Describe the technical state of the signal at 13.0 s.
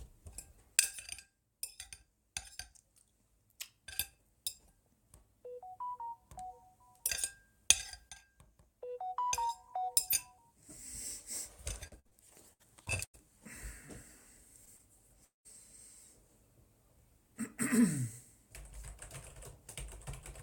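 At 13.0 s the sound is inside a stretch of repeated packet loss (robotic sound), 11.87 to 13.16 s. Six gaps, the longest 90 ms, are patched by extending the preceding audio, covering about a quarter of the span. The result is choppy, with pieces missing. The spectrogram shows smeared, frozen bands, and the waveform shows repeated blocks.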